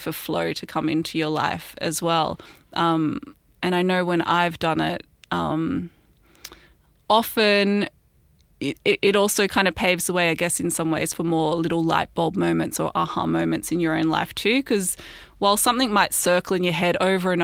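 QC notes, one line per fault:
Nothing to flag here; I listened through the speech and heard no problems worth noting.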